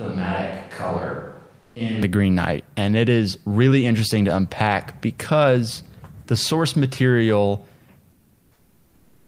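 From the start until 2.03 s the speech sounds roomy and hollow, thin in the bass and about 10 dB quieter, with room noise only about 35 dB below it, likely a switch to a distant microphone. Unlike a simple gain drop, the voice's tone itself changes, and it snaps back to close, full sound at 2.03 s.

Within that stretch, at 1.61 s, a 0.14 s pause has its background replaced by steady, featureless hiss. This is comfort noise in place of the background, likely from discontinuous transmission such as Opus DTX. The same happens after "because the source material", from 8.11 s to the end, with the filler about 7 dB quieter than the real background. It differs from a microphone change because only the gaps are affected.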